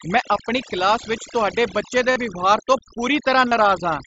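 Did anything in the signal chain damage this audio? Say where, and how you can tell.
Yes. Overdone noise removal runs throughout in the call processing stage. The background sinks to near silence with twinkling specks as bands are gated off.

Concealed Bluetooth headset packet loss appears at 2.12 to 2.16 s and 3.48 to 3.52 s. Each gap of about 38 ms is filled with a repeated buzzy tone, then warbles as real audio resumes.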